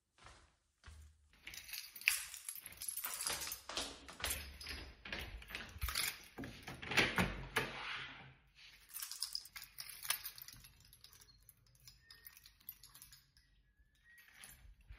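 There are no technical faults to describe at any point in the sound.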